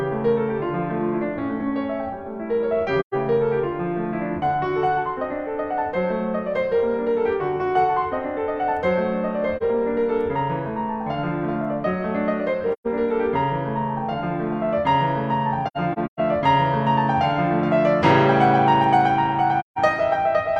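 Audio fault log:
3.00–3.14 s, 9.57–9.63 s, 12.73–12.87 s, 15.67–16.20 s and 19.60–19.79 s: AAC frame loss with muting. The music drops into soft-edged holes of about 43 to 170 ms, with the 15.67 s stretch broken into several gaps, the longest around 150 ms. The decoder zeroed the missing spectra, and the overlapping windows fade out and back in over about a frame. The spectrogram shows blank vertical bands with tapered edges, and the waveform shows envelope pinches narrowing to silence.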